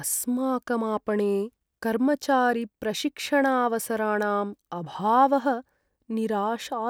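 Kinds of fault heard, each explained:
Nothing stood out on listening to the speech in this recording.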